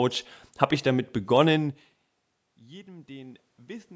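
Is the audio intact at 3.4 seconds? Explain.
No. At 3.4 s the clip is inside a stretch of automatic gain rising that runs from 2.42 s to 3.95 s. The input level fell by about 24 dB, so the gain control judged the signal too quiet and began stepping its gain up, by about 5 dB over this span. Because the gain acts on everything the microphone picks up, the speech and the room noise swell together in a slow, steady lift rather than a sudden jump.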